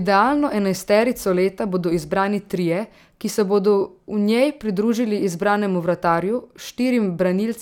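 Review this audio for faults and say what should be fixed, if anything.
Nothing in the recording calls for correction, since the signal holds steady throughout with no audible technical faults to fix.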